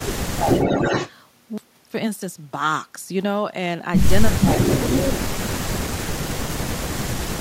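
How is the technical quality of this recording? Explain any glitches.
The recording has recurring call-path glitches: the talker's level repeatedly collapses, and delayed echoes of the voice come back twice.

Speech suppressed in double talk occurs from 0.0 to 0.47 s, 4.31 to 4.54 s, 4.91 to 5.39 s and 5.91 to 7.2 s. The speech dips by roughly 25, 15, 25 and 40 dB. The likely cause is an echo canceller mistaking overlapping talk for loudspeaker echo and turning both down.

Echo leak follows at 0.47 to 1.11 s and 4.41 to 5.0 s. A copy of the voice returns about 418 ms and 371 ms late, at a level roughly 5 dB above the speech. This is likely residual loudspeaker pickup that the far end's canceller failed to remove and sent back.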